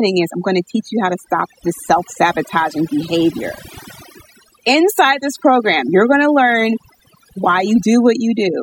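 Overdone noise removal runs throughout: an over-strong noise reducer cuts any frequency band near its noise estimate, including quiet speech detail. Pauses fall to near silence with twinkling specks. Unlike codec artefacts, the damage tracks the noise floor.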